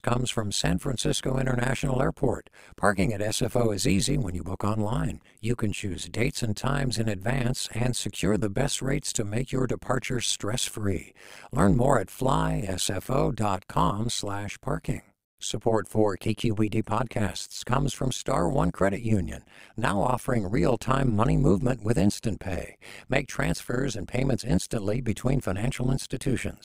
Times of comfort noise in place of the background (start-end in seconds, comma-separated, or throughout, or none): none